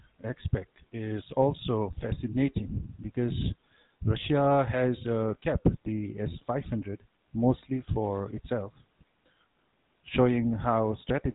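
From start to finish the speech carries the buzzy, gravelly grit of the GSM full-rate codec, which fits its old 13 kbps mode: the vocal tract gets modelled and fed a coarse pulse train, so voices turn rough, and everything above about 3.8 kHz is simply gone.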